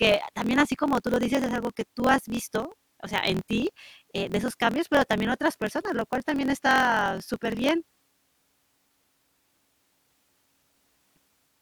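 From start to finish the speech carries a steady 43.1 Hz buzz and runs 1.12 times fast. This is a block size mismatch (truncated): each block's tail is discarded, which fits 1024-sample reads. Unlike a sample-rate mismatch, the timbre stays.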